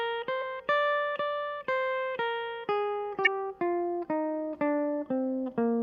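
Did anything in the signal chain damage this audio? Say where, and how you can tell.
Yes. Damaged data in a compressed stream, at the codec stage, breaks the music twice, from 0.38 to 0.42 s and from 3.23 to 3.28 s. Each break is short, 40 to 50 ms. Corrupt bytes in the compressed stream make the decoder misread those frames and lose sync until it finds a valid frame header. A buffer underrun would leave a gap of silence or a click.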